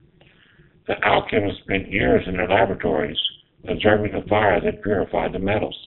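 Speech runs through a narrowband mobile path, with nothing above 4 kHz, and the whole clip carries a heavy overlap-add ripple. The frames were windowed and stitched back together with an overlap that doesn't sum to a steady gain, so the level dips once per frame at around 200 Hz. The swing is deep, about 60 dB, so it comes across as a harsh, metallic buzz with extra tones around each note riding on everything rather than a gentle flutter. Around 4.08 to 4.18 s there are lost AMR speech frames. The sound points to a single dropped 20 ms frame that failed its check, with the decoder patching the gap by reusing the last good pitch and vocal tract settings at reduced gain. You hear a brief dip and warble, and the voice comes back weak or rough for a moment after.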